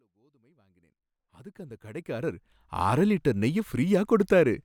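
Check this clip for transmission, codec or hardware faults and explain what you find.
No transmission, codec or hardware faults turn up here; the level just fades in smoothly from the start until about 2.79 s.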